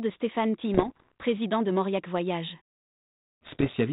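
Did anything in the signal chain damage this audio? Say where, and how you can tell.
Yes. Bit errors on an ADPCM link damage the audio from 0.74 to 1.12 s and again from 3.46 to 3.75 s. This is a transmission fault on the digital link carrying G.726 ADPCM, which fits a 32 kbit/s stream limited to below 4 kHz. Both stretches have pops and rough, gritty bursts, with the level briefly jumping and sagging. About one bit in a hundred arrives flipped. Because ADPCM sends only differences from a prediction, each wrong bit also corrupts the decoder's step size and predictor. The error then rings on for several milliseconds instead of staying a single click.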